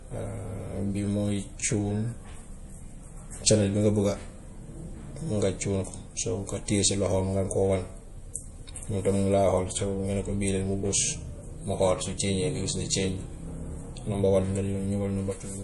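Across the whole speech clip, nothing reaches above 11.4 kHz, and the audio carries a plainly audible watery, swirling texture, with s sounds turning chirpy and metallic and consonant attacks smeared. The likely cause is MP3 compression at a low bitrate, consistent with about 48 kbps: starved of bits, the encoder chops the treble and drops faint frequency lines that flicker between frames. A plain low-pass filter would only dull the top end, not add this shifting swirl.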